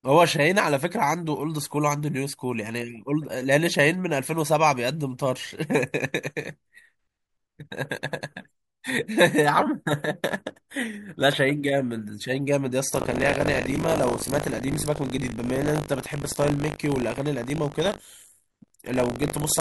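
Buffer tearing sets in at 12.92 s and runs to the end of the speech. The program filling the playback ring buffer and the hardware draining it have drifted into each other, so every period now carries a slice of stale audio, around a tenth of it and roughly 70 ms old, butted against the current sound with hard joins. Those splices repeat at 50 Hz, pointing to a 20 ms buffer period, and give a steady robotic buzz that rides on the signal.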